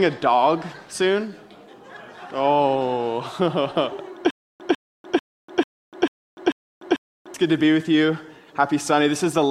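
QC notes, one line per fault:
4.31–7.34 s, stutter with silent gaps: the same 149 ms fragment plays seven times, one every 443 ms, with 294 ms of digital silence between, likely a stalled stream replaying its last fragment on each retry. Waveform: identical blocks between flat zero lines; spectrogram: evenly spaced blank columns.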